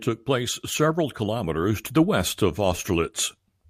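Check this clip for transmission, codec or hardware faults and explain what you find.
No transmission, codec or hardware faults are audible anywhere in this speech recording.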